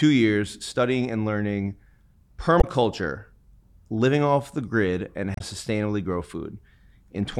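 A speech recording with two bursts of damaged data in a compressed stream, at 2.58–2.64 s and 5.34–5.41 s: corrupted bytes make the decoder misread frames and resync, giving brief glitches seen as ragged broadband smears and abrupt waveform discontinuities.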